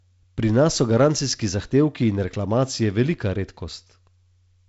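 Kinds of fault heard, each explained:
No faults heard: the speech carries only the expected wideband telephone band limit near 7.7 kHz and a light coding hiss in the upper band.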